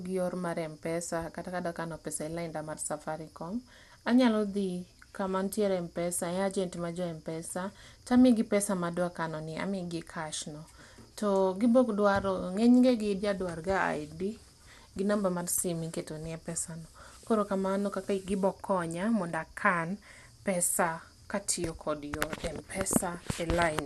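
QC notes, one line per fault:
throughout: likely MP2 compression, with nothing above 12.2 kHz and plainly audible gurgling, granular grit from starved sub-bands flickering, unlike a clean low-pass, fitting about 80 kbps.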